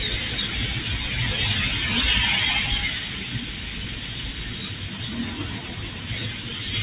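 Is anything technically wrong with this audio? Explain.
Yes. A speech noise suppressor was left running on these sounds. It treats steady tones and ambience as noise, so levels pump and swing by around 10 dB throughout.

At 3.44–3.71 s and 4.45–4.97 s the same suppressor cut the sound further. It mistook these passages for noise and pulled them down by about 5 dB, so sustained parts sink and fade early. The audio arrives over a call path using G.711 A-law, which is why nothing reaches above 4 kHz.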